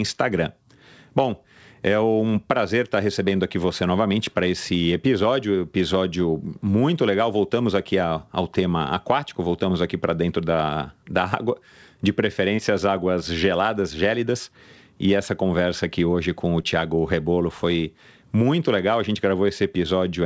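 At 12.56 to 12.60 s and again at 16.62 to 16.66 s, short concealed packet loss occurs. About 20 ms of the call arrived too late each time, and the receiver filled the gap by extending the preceding sound before blending back. Each is heard as a brief smear or wobble, over band-limited call audio with nothing above 8 kHz, which fits a G.722 wideband path.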